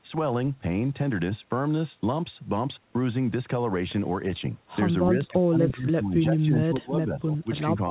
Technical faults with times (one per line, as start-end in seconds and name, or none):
5.13-7.90 speech suppressed in double talk